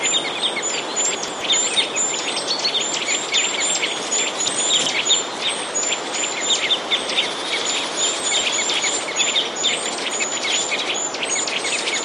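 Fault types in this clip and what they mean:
Chunks out of order: 128 ms blocks play late by one or two blocks at 1.15, 4.48 and 9.86 s, giving jumbled moments with hard joins.
Loud pop: a single sharp pop at 8.2 s, roughly 10 dB above the sound, likely a voltage spike from a switch or static discharge.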